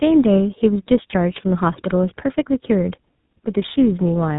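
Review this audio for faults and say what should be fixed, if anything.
Tandem speech coding runs through the whole clip. The audio passed through iLBC at 13.33 kbit/s, then G.711 A-law, then GSM full rate at 13 kbit/s, so two speech codecs each re-encoded what the previous one had already damaged. That compounding makes the speech rougher and more warbly than either codec alone would. A single low-bitrate codec leaves one layer of artefacts. Here the grit and smearing are stacked, sitting on a band that stops near 3.8 kHz. To prevent it, negotiate one end-to-end codec or use transcoder-free operation so the speech is encoded only once.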